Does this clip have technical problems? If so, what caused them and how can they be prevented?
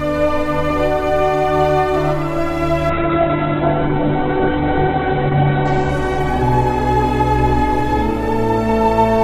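Yes. A call bitrate drop runs from 2.95 s to 8.77 s. The bandwidth estimate fell, so the encoder was forced to spend far fewer bits. The sound turns coarse and muffled. The top end narrows from about 20 kHz to about 4 kHz. The worst stretch lasts about 2.5 s before quality climbs back. The degradation suggests a fall from roughly 96 kbps to near 7 kbps. To prevent it, stabilise the network path, or set a sensible minimum bitrate.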